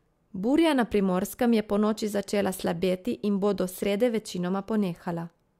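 No technical faults can be heard anywhere in the speech recording, and the signal stays continuous and intact throughout.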